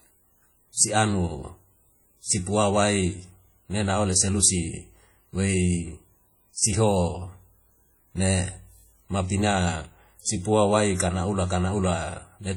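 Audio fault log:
Throughout: WMA compression, likely the cause of the heavy smearing heard across the whole speech clip. Quantisation noise from long transform blocks spreads over tens of milliseconds around each sound, giving a ringing, washy texture and a hiss that rises and falls with the signal. Weak spectral detail drops out, which fits a low bitrate near 32 kbps. Content still reaches about 20.1 kHz.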